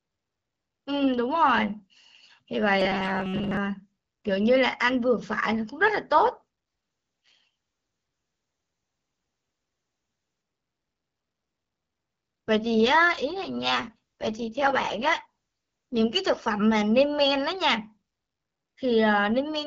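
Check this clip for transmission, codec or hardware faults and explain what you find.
Three faults stand out, one robotic stretch and two periods of rougher coding, against a wideband AMR-WB call at 12.65 kbit/s.

From 2.80 to 3.57 s the speech becomes a rigid metallic buzz near 188 Hz: robotic sound from repeated short buffers, likely from replaying about 5.3 ms slices while most real audio is skipped.

At 7.25 to 7.48 s and 12.55 to 16.19 s the speech turns raspy and synthetic. This is an AMR rate drop from 12.65 to 6.6 kbit/s, trading quality for error protection.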